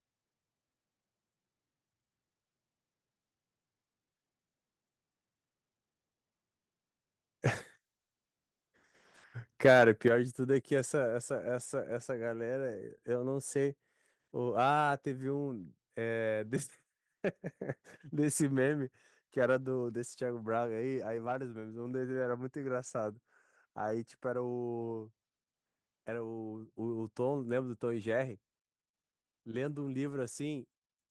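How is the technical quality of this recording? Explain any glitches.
Two glitches stand out, both in the middle of the speech.

From 9.64 to 9.89 s there is microphone overload. Peaks run about 4 dB past the limit, clipping a small share of samples. It sounds harsh and crackly, likely from input gain set too high.

At 10.08 s the microphone volume steps down. Voice and background drop about 6 dB at once, likely because the call software cut input gain after that distortion.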